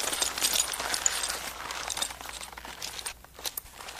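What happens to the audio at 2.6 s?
Nothing goes wrong at 2.6 s; the audio plays through that moment intact, with no dropout, click, distortion or other fault.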